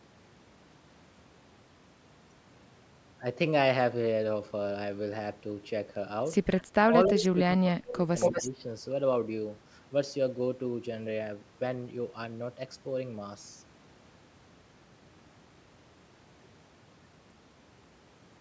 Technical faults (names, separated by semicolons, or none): speech suppressed in double talk; echo leak